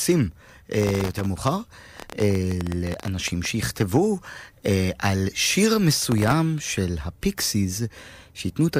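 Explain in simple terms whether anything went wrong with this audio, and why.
The computer handling the speech fell behind between 0.82 and 1.26 s, and again between 5.99 and 6.33 s. This is processor overload crackle: it missed some twenty to forty tiny buffer deadlines in a row, each repeating a sliver of old audio, so the sound turns gritty and crackly.

From 2.00 to 3.46 s there is a train of clicks, likely caused by electrical interference or a faulty connection. About thirteen sharp, uneven ticks per second pop clearly above the speech.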